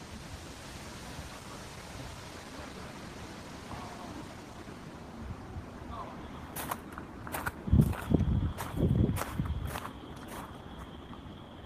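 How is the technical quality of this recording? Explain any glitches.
Playback is disrupted early in the recording by one abrupt jump and two stretches of hurried audio.

At 2.07 s there is a skip ahead: well over half a second of audio was dropped and both sides were spliced with no gap. Unlike a dropout, nothing is silenced or filled.

From 2.17 to 3.49 s and from 3.97 to 4.90 s, jitter buffer speed-up runs the sound at 112% and then 116%. Repeated removal of short pieces of one or a few pitch periods drains the surplus delay, so pitch stays unchanged, unlike a resampling error.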